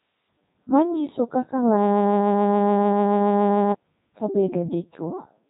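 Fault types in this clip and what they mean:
Codec 2 vocoder: The speech was passed through a very low-rate digital-radio vocoder that keeps only pitch, voicing, energy and a rough spectral envelope, then rebuilds the sound from sine waves instead of preserving the original waveform. The damage is heavy, consistent with its top 3.2 kbit/s mode: the speech comes out robotic and buzzy throughout, with a synthetic quality, and nothing is present above 3.8 kHz.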